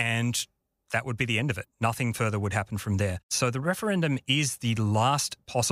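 Right after "be the end of", from 1.61 to 1.65 s, the speech breaks for 44 ms into a chirp, squawk, click or short gap. This is damaged data in a compressed stream: corrupted bytes made the decoder misread frames and lose sync until the next frame header.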